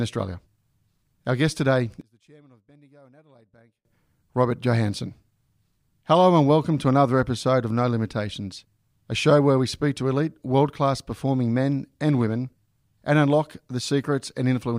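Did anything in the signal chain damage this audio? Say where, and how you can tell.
Yes. From 2.01 to 3.85 s, right after "guest today", the speech collapses by about 34 dB into a faint residue. That points to one channel inverted, likely from reversed analogue wiring, so the shared centre content cancels when the channels are summed to mono.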